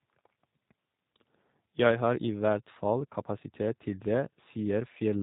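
Speech passed through a G.729-type codec for its full length, which fits an 8 kbit/s low-rate VoIP link that rebuilds the signal from a vocal tract filter and sparse pulses. Everything above 4 kHz is gone, and the speech sounds plainly rough, buzzy and synthetic.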